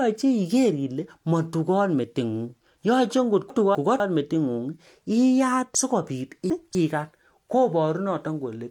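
A 250 ms chunk of the speech is delivered late and played after the chunk that should follow it, so between 3.5 and 4.0 s the two chunks are heard swapped: chunks out of order. The same fault returns from 5.75 to 6.75 s, where one chunk lands three chunks late. Nothing is missing, but each spot sounds jumbled and garbled, with hard joins where mismatched audio meets.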